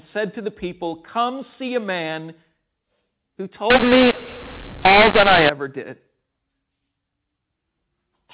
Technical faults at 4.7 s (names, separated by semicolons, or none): mu-law and A-law mixed up